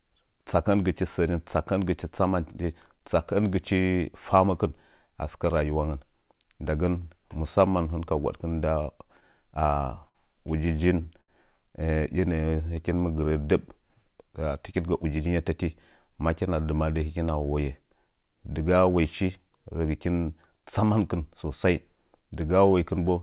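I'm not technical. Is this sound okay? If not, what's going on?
No. From 9.2 to 10.17 s the speech catches and drags five times, each sound briefly held, the longest hold about 57 ms. This is repeated stalls (stutter): pieces of the call audio kept arriving late, so the receiver ran out and stretched the last sound while it waited.

At 11.21 s a single sound hangs on for about 72 ms before the speech picks up where it left off. That is a short stall from a late packet: one chunk of audio arrived late, and the receiver held the previous sound until it came.

From 11.9 to 12.75 s the speech slows to about 94% of normal pace without changing pitch, so sounds feel slightly drawn out. This is a jitter buffer slow-down: the receiver repeated tiny slices of sound, adding about 61 ms, to rebuild its reserve.

From 14.78 to 15.5 s the speech rushes, running at about 112% speed at the same pitch. 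This is a jitter buffer speed-up: too much audio had piled up, so the receiver trimmed roughly a tenth of a second of tiny slices to catch up.

Throughout, the call line carries nothing above 4 kHz, which gives the telephone-like sound.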